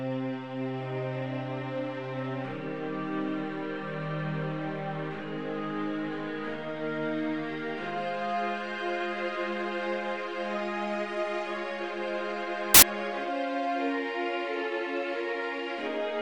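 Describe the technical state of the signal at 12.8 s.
At 12.8 s the signal is corrupted by samples built from the wrong bytes, from 12.74 to 12.82 s: misaligned byte assembly promotes low-order bits, producing a burst of loud, harsh broadband noise.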